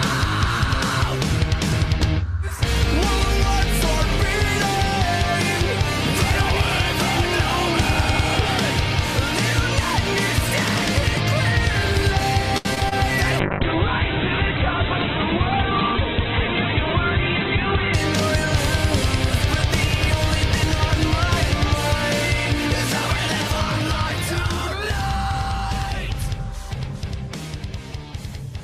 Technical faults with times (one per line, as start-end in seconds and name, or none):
12.57-12.93 repeated packet loss (robotic sound)
13.41-18.02 call bitrate drop